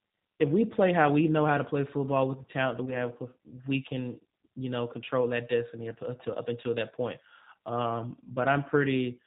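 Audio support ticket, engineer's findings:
G.729 codec, whole clip: speech band-limited below 4 kHz, slightly rough, synthetic texture, plainly audible. Vocal tract filter plus sparse pulse excitation rebuilding each 10 ms frame; roughness fits an 8 kbit/s G.729A path.

VoIP packet loss concealed by the speech codec, 2.85 to 2.96 s, right after "with the talent that": brief buzzy or noisy smear, fading and weak, recovering over the following tens of milliseconds. Decoder extrapolating last pitch and filter across a gap that fits one lost 20 ms packet, then rebuilding state.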